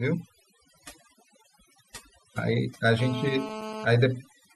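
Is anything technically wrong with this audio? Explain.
Yes, this speech clip has two faults.

Throughout, overdone noise removal has cut bands near the noise estimate to silence, leaving twinkling specks between phrases, unlike codec smearing.

From 2.99 to 3.85 s, GSM phone buzz appears: a steady, raspy 217 Hz buzz at about −11 dB with many harmonics, harsher than 50 or 60 Hz mains hum.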